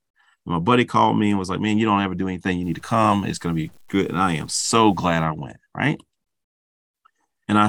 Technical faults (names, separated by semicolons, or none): low bit depth without dither